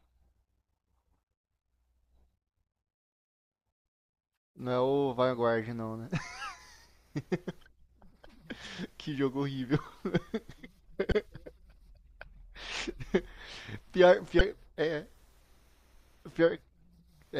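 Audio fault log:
11.09–11.12 s and 14.38–14.41 s, damaged data in a compressed stream: two short blips of about 30 ms each in the speech, where corrupted bytes in the compressed file made the decoder misread those frames and lose sync until it picked up the next frame header.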